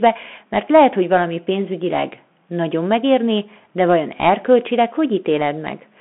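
A Bluetooth CVSD headset codec runs through the whole clip, from start to finish. The speech is squeezed into a telephone-style band of roughly 200 Hz to 3.4 kHz, with nothing above 3.8 kHz, and the coding damage is plainly audible. CVSD sends a single up-or-down bit per sample, which fits a 64 kbps link, and its step size struggles to follow fast, loud high content. That leaves s sounds scratchy and a granular hiss under the speech.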